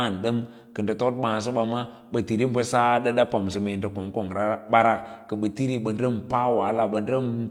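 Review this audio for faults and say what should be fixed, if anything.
No faults; nothing to fix.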